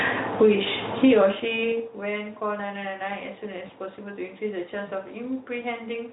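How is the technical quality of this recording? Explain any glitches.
The recording has two audible faults: gain pumping across the whole clip and a brief dropout concealed by the speech codec.

Gain pumping is present from start to finish. The level swings by roughly 10 dB as the gain is pulled down on loud sounds. The likely cause is input gain set far too high, with a fast compressor or limiter clamping down on each loud syllable and releasing in the gaps. The result is squashed dynamics. On a waveform the peaks look flattened to a near-constant height.

VoIP packet loss concealed by the speech codec occurs at about 3.67 to 3.72 s. Roughly 20 ms of audio went missing, which fits a single lost frame. The Speex decoder filled the hole by extending its last pitch and spectral shape while fading the gain, so the sound is briefly stretched and fades. The speech stays weakened or distorted for a short stretch afterward while the decoder's state recovers. 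On a spectrogram this appears as a short smeared patch with a dip in energy. The waveform shows a small segment with reduced amplitude.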